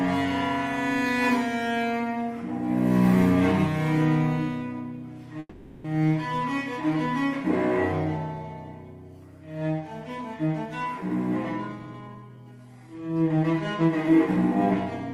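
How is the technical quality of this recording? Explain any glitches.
Two glitches affect the recording. From 5.39 to 5.86 s there is a call audio freeze. The last sound is stretched into a fading buzz or hiss for about 450 ms, then 30 ms of silence. Packets were likely delayed, so nothing is lost. From 11.72 to 14.07 s there is a jitter buffer speed-up. Tiny pitch-period slices, about 0.3 s in total, are cut out. Playback runs at 111% without a pitch change, so it sounds hurried.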